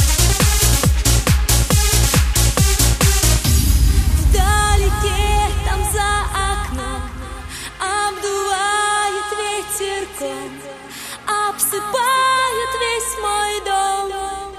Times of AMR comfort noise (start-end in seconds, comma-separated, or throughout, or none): none